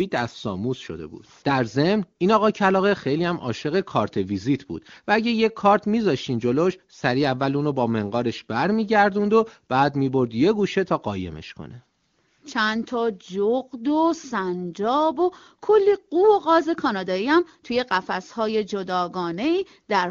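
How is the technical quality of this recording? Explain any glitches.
No glitches in this speech recording; the audio shows the band-limited sound of the AMR wideband (HD Voice) codec, consistent with its top 23.85 kbit/s mode, with at most a faint coding trace.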